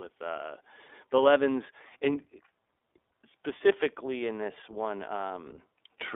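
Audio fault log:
Throughout, iLBC codec: the speech sits in a narrow telephone band, roughly 300 Hz up to 3.6 kHz, so everything above that is gone and it sounds boxed-in. There's also a plainly audible rough, slightly synthetic edge, because the codec rebuilds the excitation fresh for each 20 ms frame rather than carrying it over from the last one. The texture fits iLBC's 15.2 kbps mode.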